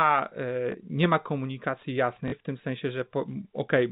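Packet loss with last packet repeated occurs at 0.72 to 0.74 s, before "nie ma komunikacji", and at 2.28 to 2.32 s, between "nie ma komunikacji" and "w tym sensie". The receiver replays the previous packet across 20 ms, then 40 ms gaps, producing a small blip, then a short robotic stutter.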